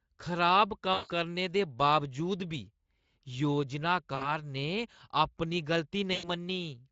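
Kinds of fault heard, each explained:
VoIP packet loss concealed by the speech codec: Three brief spots where the speech smears into a buzzy, held tone that weakens and fades, at 0.93 s just before "करने दे", at 4.15 s before "ने अपनी", and at 6.13 s right after "ने अपनी". Stretches of about 160, 60 and 100 ms went missing. The Speex decoder, whose own coding damage is light here, filled each gap by extending its last pitch and spectral shape at falling gain.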